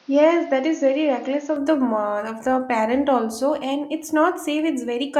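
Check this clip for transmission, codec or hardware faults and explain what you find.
One fault is audible, an input switched to a poorer device. From 0.0 to 1.56 s the speech is dull and boxy, with nothing above 6.8 kHz. It is somewhat quieter, with a faint added noise floor. The likely cause is the input starting on a narrower-band microphone before switching. At 1.56 s the sound clears without a gap.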